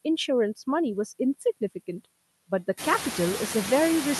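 Noise suppressor artifacts run through the whole speech clip. The suppressor pulls down whatever bands it judges to be steady noise, frame by frame, by about 15 dB, so the background drops away in the gaps and comes back up underneath the speech. That pumping gets easier to hear once the room noise jumps by about 16 dB at roughly 3 s, leaving it only about 9 dB under the talker, with the call path's 12 kHz top end framing it all.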